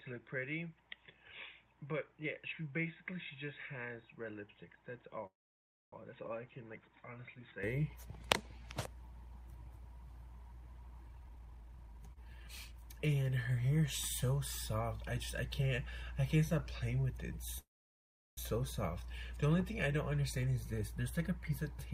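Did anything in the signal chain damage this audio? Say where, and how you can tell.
Yes. From 0 to 7.63 s the spectrum stops at 3.8 kHz and the level sits about 10 dB lower, with a different noise floor. That points to a likely input switched to a poorer device at the capture stage.

At 5.26–5.93 s and 17.58–18.38 s, a brief buzz fades into flat waveform, silent for 620 and 730 ms. This is likely a call audio freeze from network delay.

From 11.08 to 13.15 s playback runs at 132%, and from 20.32 to 21.06 s at 113%. This is jitter buffer speed-up: harmonics keep their spacing while events crowd together in time.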